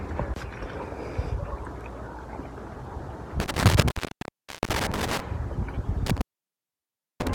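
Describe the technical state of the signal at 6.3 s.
At 6.3 s the signal is inside an intermittent contact fault running from 6.06 s to 7.35 s: a loose connection opens the line for about 0.99 s, so the sound drops out, leaving faint hiss between crackles. The waveform collapses to a thin noise band, and the spectrogram goes nearly empty between sharp vertical broadband streaks at the edges.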